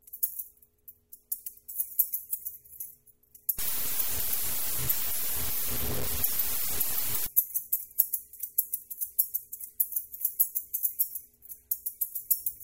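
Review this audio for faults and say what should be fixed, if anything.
Low bit depth without dither, 3.59 to 7.27 s: the sound turns coarse and grainy, with distortion that tracks the signal and is roughly as loud as the sound itself. This likely comes from truncation to about 5 bits with no dither, so rounding error follows the waveform. Keep audio at full resolution throughout processing and apply dither whenever reducing bit depth.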